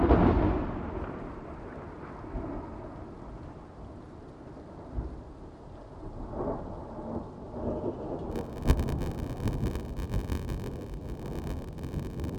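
A recording of sounds. From 8.31 s to the end, a 93.8 Hz buzz appears and playback slows to 0.861 speed with the timbre kept. This is a padded block size mismatch, consistent with zero-filled 512-sample blocks.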